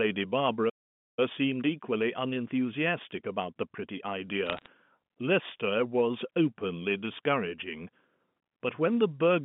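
At 0.69 s the speech just drops out and stays silent until 1.19 s, about half a second. That's a playback stall: the player most likely ran dry of buffered data or had its thread held up.

From 1.19 s to 4.19 s you get time-compressed catch-up. The player is eating its backlog by snipping out tiny slices and cross-fading over the joins, so the speech runs about 1.1 times fast. It sounds hurried but keeps its normal pitch.

Then between 4.47 s and 4.67 s there's a short burst of bit errors on a digital phone line. Each flipped bit corrupts a single sample, and the ones landing on the sign or high bits come through as sharp ticks. At an error rate of a few tenths of a percent, they add up to a brief crackle over the speech, which itself stays intact underneath, still carrying the band-limited G.711 telephone sound.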